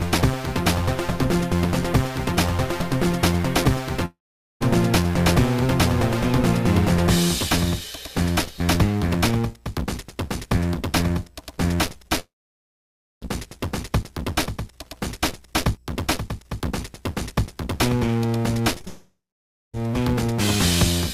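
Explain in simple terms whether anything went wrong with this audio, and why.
Yes, several things went wrong, all of them gaps where sound failed to arrive.

The biggest problem is a long network dropout, which happens three times. The first is at 4.05 to 4.62 s, the second at 12.20 to 13.23 s, and the third at 18.88 to 19.80 s. In each one, about half a second to a full second of audio is simply lost. You hear the last sound carried on briefly as a fading buzz, then near silence. That is about 0.45 s of silence the first time, 0.94 s the second and 0.57 s the third. Then the audio resumes, with the missing part gone for good. The likely cause is the connection stalling, so nothing reached the listener.

Just before the second dropout, at 12.08 to 12.11 s, there is a short concealed packet loss. About 20 ms of sound went missing. The player covered the hole by stretching the previous sound for a moment. 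You may hear it as a tiny smear or wobble.

Finally, from 18.78 to 19.78 s there are scattered short gaps. Roughly four small pieces went missing here and there, the longest around 15 ms. Each was patched over by repeating the sound before it. This causes brief hiccups, and they overlap the third dropout.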